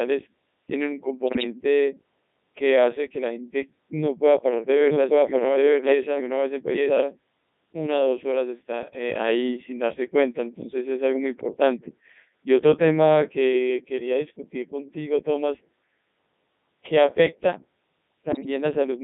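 Codec 2 vocoder runs throughout the speech, confining it to roughly 150 Hz to 3.7 kHz, with heavy damage even at its top 3.2 kbit/s mode. No waveform survives. The decoder rebuilds each frame from sine waves driven by transmitted pitch, voicing, energy and spectral envelope. The result is a robotic, buzzy voice with a synthetic sheen and thin low end, because only a parametric sketch of the sound crosses the link.

Bit errors on digital voice radio strike first from 1.27 to 1.44 s and again from 18.32 to 18.46 s, each burst spanning what sounds like several consecutive vocoder frames. At an error rate of a few percent, the later burst somewhat worse, corrupted bits scramble the pitch, level, voicing and spectral parameters of whole frames. The voice lurches in pitch and loudness, its tone colour flips abruptly, and it dissolves into warbling bleeps and brief robotic gibberish before recovering.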